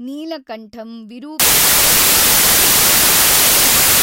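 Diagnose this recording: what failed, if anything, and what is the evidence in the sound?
The sample-format conversion failed from 1.40 s to the end. The samples were built from the wrong bytes, so the fast-changing low bits land in the high-order position. From then on the speech is heard as loud, harsh broadband noise, close to white on the louder sounds.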